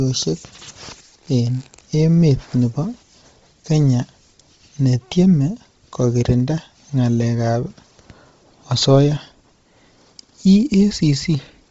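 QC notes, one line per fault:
Throughout: Bluetooth LC3 compression, heavy. Nothing sounds above about 7.8 kHz, and the upper band has a breathy, grainy noise fill, which fits a likely LC3 link near 24 kbps with 7.5 ms frames. A spectrogram shows a hard ceiling and smeared, blocky texture below it.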